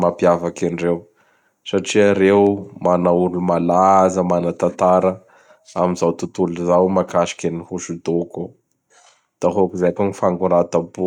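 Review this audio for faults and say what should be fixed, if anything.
Nothing here needs fixing: the speech signal holds steady throughout, with no technical fault to be heard anywhere in the recording.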